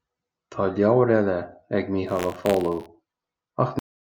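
The clip is speech with two faults. From 2.06 to 2.87 s, right after "leabhar eile ag", there is buffer tearing. A robotic buzz at 86.1 Hz rides on the sound. That rate fits a 512-sample buffer. The writing program and the playback hardware have slipped out of step, so their positions cross inside each period. A small slice of every buffer holds audio from about 40 ms earlier. Hard joins on both sides of that slice make the rattle. At 3.79 s the clip has a cut-off end. The sound stops mid-utterance and drops straight to digital silence with no decay. The final buffers were never written or played, so the tail of the sound is missing.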